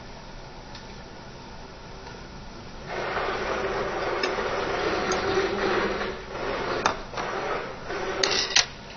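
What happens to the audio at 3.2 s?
At 3.2 s you're hearing what's likely AAC compression, present right through: a low bitrate starves the spectrum, so nothing survives above 6.6 kHz and the sound turns dull and warbly.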